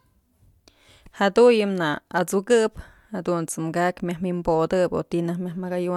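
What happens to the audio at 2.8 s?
Nothing goes wrong at 2.8 s; the speech runs on intact through that moment, with no dropout, click or distortion.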